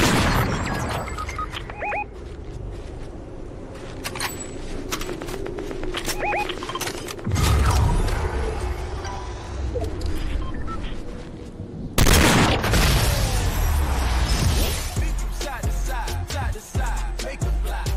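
No technical faults can be heard anywhere in this audio. Nothing in it calls for a timestamp or an explanation.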